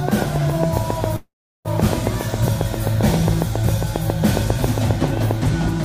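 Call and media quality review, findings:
Train of clicks, 0.09–5.32 s: regular ticking, 7.4 per second, around 40 clicks, peaks roughly 15 dB over the sound. Likely interference pickup or failing interface injecting pulses.

Call audio freeze, 1.16–1.68 s: fading buzz then about 360 ms silence, audio resumes intact, 488 ms late. Likely delayed packets draining the jitter buffer; nothing lost.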